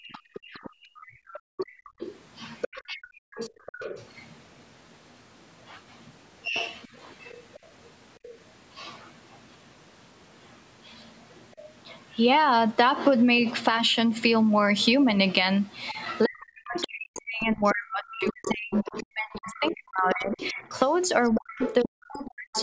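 From 0.0 to 1.99 s the echo canceller clamped the microphone hard while its loudspeaker was active. This background gating by the echo canceller makes the room tone dip by as much as about 37 dB, in brief holes adding up to under a second.

From 0.11 to 7.66 s a second voice sits behind the talker, roughly 15 dB down. This is the other side's voice leaking through, likely because the canceller left part of the loudspeaker signal in the microphone.

Between 0.8 and 6.56 s the talker's own voice drops out in short pieces, by around 35 dB at worst and for under a second in total. This is speech suppressed in double talk, likely because the canceller could not tell the talker from the overlapping echo.

A faint scrap of that leaking voice, about 25 dB below the talker, returns at 11.52 to 11.69 s.

From 15.88 s to the end, the leakage is much stronger, only around 10 dB under the talker. Over the same stretch, from 15.94 to 22.56 s, the suppression returns more heavily. 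The talker's voice is cut by up to about 40 dB for roughly five seconds altogether, leaving it broken up while the other side speaks.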